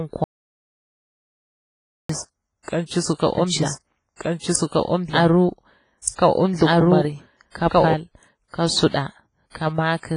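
The whole clip carries what sounds like WMA compression at a low bitrate, likely a simple first-generation encoder working at around 24 kbps. Its long transform blocks smear quantisation noise over tens of milliseconds and zero out weaker spectral detail, so the speech sounds heavily damaged: ringing, washy, with a hiss that swells and falls with the signal. The band stops at about 10.3 kHz, leaving nothing above it.

From 0.24 s to 2.09 s there is an audio dropout to silence. The input was lost for about 1.85 s, likely through a disconnected device, a failed link or a stray mute, while recording carried on writing silence. The speech cuts out abruptly and the gap is dead, with no room tone at all. Whatever was said then is gone, and sound resumes mid-flow just before "kan cisu ka".

From 3.38 s to 7.94 s, after "kan cisu ka", a doubled audio track appears. The same audio is mixed in a second time, likely from a slower capture path or an edit holding two misaligned copies. 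That full-band copy trails about one and a half seconds behind at roughly the same level as the original, so earlier phrases replay over the current ones. The copy has no decay or room colour, and it switches on and off abruptly.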